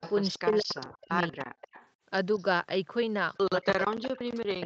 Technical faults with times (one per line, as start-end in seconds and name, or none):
0.00-0.89 echo leak
0.38-1.37 speech suppressed in double talk
1.29-1.90 echo leak
2.35-2.44 echo leak
3.44-4.65 speech suppressed in double talk
3.84-3.97 echo leak